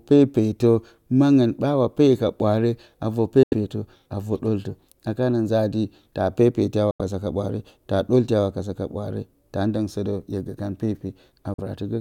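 Bluetooth dropouts cut the speech three times: at 3.43 to 3.54 s, at 6.91 to 7.01 s, between "taa pepeti a" and "ka ɓwaare taa ɗolti", and briefly at 11.54 to 11.60 s. Each is a sudden hole of silence with hard edges or a fade of a few milliseconds. The speech then resumes further along, as if it had kept playing, because audio packets likely failed to reach the headphones in time and were discarded. The longer gaps fit a loss of about 85 ms of audio each, and the last about 43 ms.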